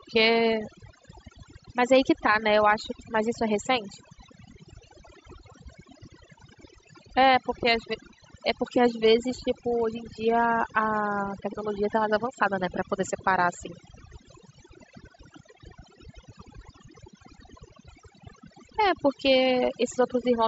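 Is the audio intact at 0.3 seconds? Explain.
No, overdone noise removal runs through the whole clip, including 0.3 s. Overly aggressive suppression mutes bands near the noise estimate, leaving twinkling near-silence.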